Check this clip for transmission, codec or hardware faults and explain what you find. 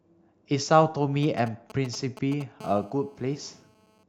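Two bits of phone interference show up in this speech, both from a 2G handset sitting close to the gear.

From 1.23 to 2.43 s you get GSM signalling bursts: the phone is only firing off short groups of transmissions, and the audio circuit rectifies them into a galloping dit-dit-dit of brief 217 Hz buzzes, sitting roughly 15 dB under the speech.

Then from 2.61 to 4.04 s it settles into proper GSM phone buzz, with the handset on a call and pulsing steadily at 217 Hz. That demodulated pulse train comes through as a constant, raspy, harmonic-heavy buzz about 28 dB below the speech, with no connection to what's being said.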